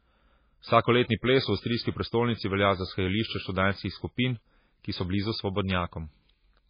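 From start to finish the speech carries heavy damage from likely MP3 compression. Nothing is heard above 5 kHz, so the top end is sliced off and the speech sounds dull and boxed in. The encoder was short of bits, which fits a very low bitrate near 16 kbps. Weak frequency lines drop in and out between frames. That gives a watery, swirling texture. The s sounds turn metallic and chirpy, and sharp onsets smear.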